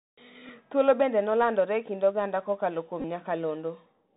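From start to finish the link is running through the Bluetooth CVSD headset codec. Each sample is coded as a single up-or-down bit with an adapting step, consistent with a 64 kbps link. That caps the band at 4 kHz. Fast, loud high-frequency movement outruns the step, so sibilants come out scratchy and distorted over a steady granular hiss. The damage is plainly audible across the whole speech clip.

Between 0.48 and 0.50 s, Bluetooth headset packets were lost and the chip re-decoded the previous packet's bits. About 11 ms went missing, which fits roughly three packets. What comes through is a brief rough buzz rather than a gap.

At 3.00 to 3.05 s, just after "kind oganda kokalo kuom", the same packet repeat happens again, more heavily. About 30 ms is lost, scattered over 37.5 ms, which points to around eight packets. The longest run is about 20 ms, and across it the repetition every 3.75 ms sets up a steady buzz near 267 Hz until clean packets return.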